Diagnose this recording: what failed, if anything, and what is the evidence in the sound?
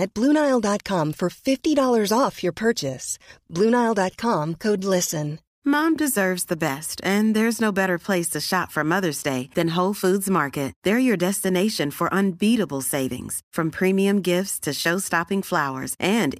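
Nothing in the speech stood out as a fault on listening, at any stage of the chain.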